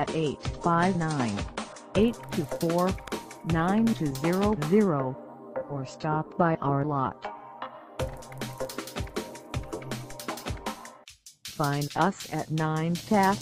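Adaptive stream starting at a low bitrate, from 0.0 to 2.0 s: the opening has nothing above about 10.2 kHz, and coding artefacts are thicker than in the rest of the audio. This points to a player beginning on a cheap version of the stream, something like a 32 kbit/s AAC-LC rendition, so playback could start quickly. At 2.0 s the top end returns abruptly with no gap, consistent with a switch to a richer rendition near 96 kbit/s once the connection was measured. Overlapping chunks appear at 3.08 to 3.12 s and again at 8.12 to 8.17 s, each heard as a brief stutter. The audio was handled in 5-second chunks, and each new chunk began before the previous one had finished. As a result, about 44 ms of material plays twice at every join, and the stutter recurs at that 5-second spacing.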